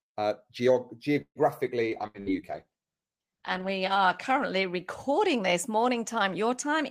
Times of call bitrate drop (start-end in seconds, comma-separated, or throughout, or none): 1.95-5.80